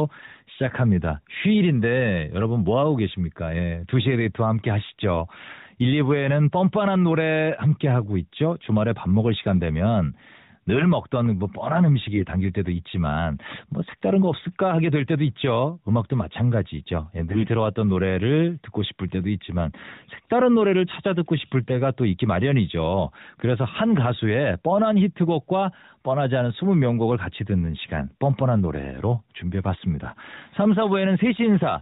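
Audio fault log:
12.12–12.25 s, 17.30–17.49 s, 21.63–21.71 s: AMR bit errors. Flipped low-priority bits, a few percent, misplace the excitation pulses and skew the fine gain and spectral values, so the sound turns briefly hoarse and gargly inside the 4 kHz narrowband ceiling. On a spectrogram the harmonics blur into ragged noise. The waveform envelope stays roughly intact.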